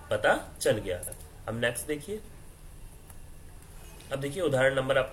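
The audio has two kinds of fault. Repeated frames at 1.03–1.12 s replay a block of about 93 ms once, so the sound stutters and runs 93 ms longer; the waveform shows the same stretch twice. Chunks out of order at 2.2–2.28 s and 3.84–4.0 s come from 40 ms chunks arriving late, by one and then three chunks, giving brief jumbled moments; a spectrogram shows abrupt vertical breaks where the chunks join.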